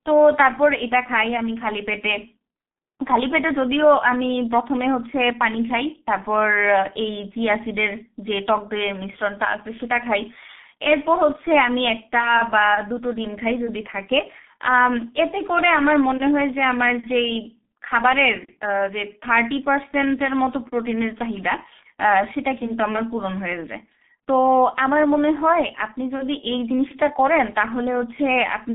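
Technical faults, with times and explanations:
Throughout, G.723.1 codec: the speech sits in a narrow telephone band of roughly 200 Hz to 3.6 kHz, with nothing at all above 3.8 kHz, so it comes across muffled and boxy. The damage is heavy. The codec chops the signal into 30 ms frames and refreshes its model of the voice only slowly, so consonants smear together and there's a rough, hoarse edge throughout. That thin, gritty character fits a bitrate of about 6.3 kbit/s.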